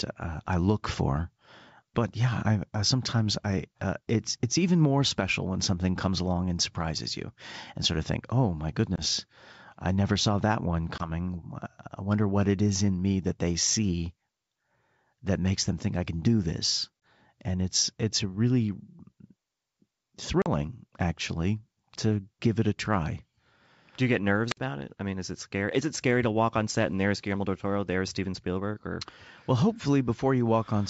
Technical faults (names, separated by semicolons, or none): packet loss on an ADPCM call; wireless microphone squelch dropout